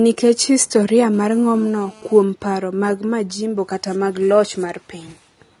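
A dull, band-limited speech recording with nothing above 11 kHz and the smeared texture of heavy perceptual coding, even though the file is a generous MP3 at 192 kbit/s. That mismatch is the signature of low-bitrate audio saved at a high bitrate: the material most likely passed through a low-rate encoder first, something on the order of 32 kbit/s AAC, which removed the top octave and left its artefacts. The later high-rate MP3 encode preserves that damage faithfully but cannot restore anything. From 1.14 s to 2.23 s a hard, raspy buzz sits under the speech at about 28 dB below the signal, pitched at 217 Hz and rich in harmonics, with no relation to what is being said. This is GSM phone buzz. A nearby 2G handset transmits in bursts 217 times a second, and the audio circuitry rectifies those radio pulses into an audible tone. Its steadiness across the whole interval fits a phone engaged in a call rather than one making intermittent data transfers.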